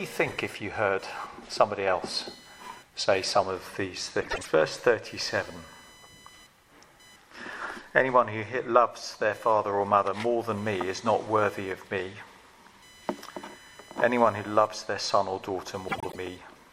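Under the whole clip there's computer activity noise, a buzzy whine pulsing around 1 kHz, roughly 30 dB down, from machine load leaking into the audio ground. At 4.20 to 4.49 s and again at 15.88 to 16.16 s, frames out of order: two neighbouring blocks of about 105 ms, likely four frames each, play swapped, giving a garbled flutter.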